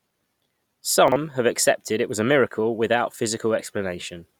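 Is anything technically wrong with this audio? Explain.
Yes. Chunks out of order at 1.08 to 1.16 s, just before "have accepted it was". A 40 ms chunk plays one chunk late, so that moment sounds jumbled.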